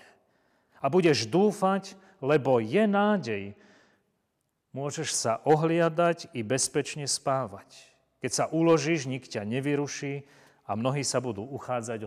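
Channel delay (comb filtering) appears from 2.87 to 3.93 s, just after "budeš dúfať lebo je". One channel runs a tiny fraction of a millisecond behind the other, which points to a lag of only a couple of samples. When the channels are summed to mono, the shared content cancels at evenly spaced frequencies, with the first notch near 10 kHz. The speech loses its top-end air and turns slightly dull for that second.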